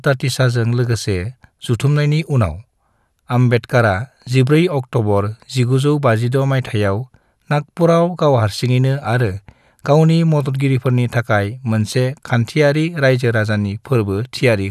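No technical faults can be heard anywhere in this speech recording. There is nothing in it to place on a timeline or describe.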